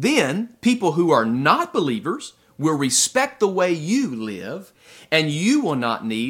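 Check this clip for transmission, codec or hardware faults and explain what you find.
Nothing in this speech recording points to a transmission, codec or hardware problem, and the signal holds steady and intact throughout.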